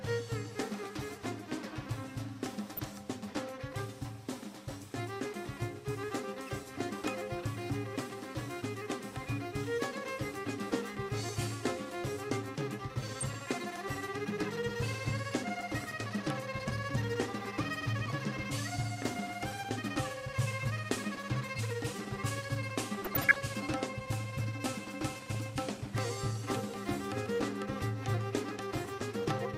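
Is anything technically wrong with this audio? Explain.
Yes. DAB burbling breaks through at four points: 2.77 to 2.89 s, 13.08 to 13.23 s, 23.05 to 23.36 s, and 25.34 to 25.41 s. Weak reception lets bit errors slip past the error correction into the MP2 audio data. Corrupted samples then put short blips of noise into single sub-bands, and corrupted scale factors make sub-bands jump in level for up to a frame. The bursts are brief, burbling disturbances over the sound. The third burst is the longest and hits the most frames, and the error rate there and at 13.1 s is roughly twice that of the other two.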